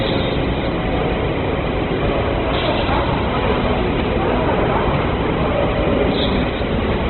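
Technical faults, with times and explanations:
Throughout: Opus compression. Nothing survives above 4.1 kHz, so the sound is narrowband and dull, and what remains is heavily damaged: tones come out rough, noisy and grainy, without the swirling, watery holes of MP3. That fits the likely cause, Opus in its music (CELT) mode starved at a very low rate, around 12 kbps, filling bands it cannot afford with folded or noise-like energy and narrowing the bandwidth.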